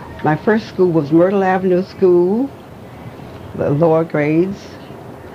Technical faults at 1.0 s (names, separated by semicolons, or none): none